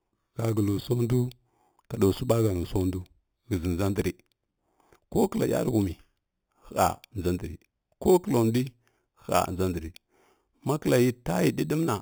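A speech clip carrying imaging from sample-and-hold upsampling throughout. The sound points to an 8 kHz source raised to 48 kHz by repeating samples without smoothing, leaving a metallic fizz about 20 dB below the speech, with the first mirrored copy filling 4 to 8 kHz.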